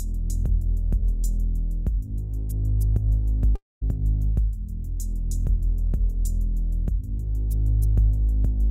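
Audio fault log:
3.55–3.83 s, long network dropout: about a quarter second of sound is lost, and the gap is bridged by a synthetic continuation of the preceding audio that thins into a fading buzz before sinking toward silence. The audio then resumes further on with the missing stretch simply gone. This is likely a receiver concealing a run of lost packets. The fading fill and the skipped material distinguish it from a clean mute or a brief single-packet click.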